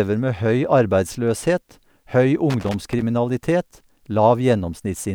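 At 2.50 s a contact in the signal path starts making and breaking intermittently, the classic loose connector crackle of a worn or dirty plug shifting in its socket. Each momentary break chops the speech, and any DC sitting on the line turns those interruptions into sharp pops. The result is an irregular burst of scratchy crackle laid over the voice, running for about half a second until it stops at 3.03 s.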